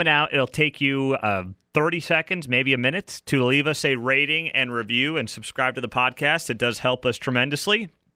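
A speech recording with nothing technically wrong with it.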